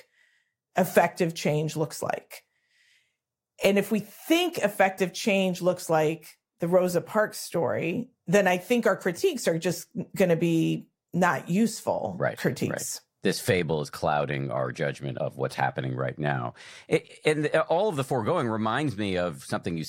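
Listening to the speech recording, nothing stood out as a technical fault at any point.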